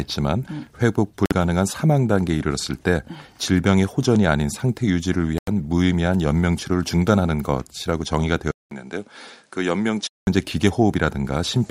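A wireless link likely stalled at 1.26 s and again at 5.38 s, starving the headphones' buffer so playback paused until resent packets arrived. The speech drops to silence for 50 ms, then 92 ms, and then resumes.

At 8.51 s the system likely switched input to a poorer device, leaving about 200 ms of silence at the switch. Until 10.27 s the speech sounds duller, with nothing above 10.6 kHz, roughly 5 dB quieter, and a new noise floor around 40 dB down.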